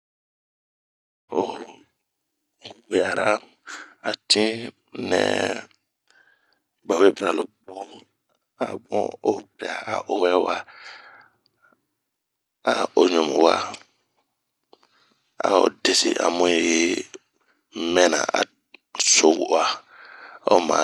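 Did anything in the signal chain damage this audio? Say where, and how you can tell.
No, nothing in the chain damaged this speech.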